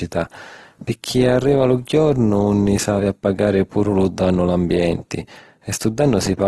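From start to finish the speech carries Opus compression damage, plainly audible: consonants and vowels sound grainy and rough, with a noisy texture where clean harmonics should be, yet little of the swirling of MP3. Nothing remains above 12.1 kHz. The likely cause is Opus in its CELT music mode at a low rate, which fits about 16 kbps, filling starved bands with noise. A spectrogram shows a flat ceiling at 12.1 kHz and smeared, speckled harmonics without deep holes.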